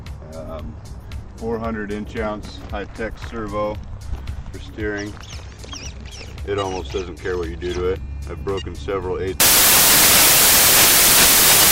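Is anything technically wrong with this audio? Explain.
Yes. From 9.40 s to the end at 11.72 s, the audio turns into loud, harsh broadband noise: samples built from the wrong bytes. The reader combines each sample's bytes incorrectly, so the rapidly fluctuating low-order bits land in the high-order positions and dominate every value. Unlike clipping or heavy distortion, the original's shape is swamped by the noise. The noise is broadband.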